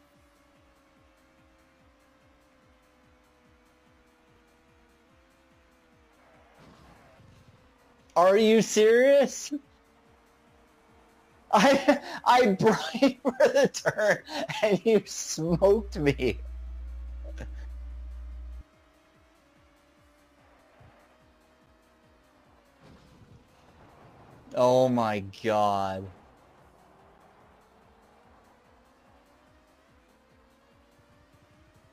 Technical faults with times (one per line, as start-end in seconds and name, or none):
15.49-18.61 mains hum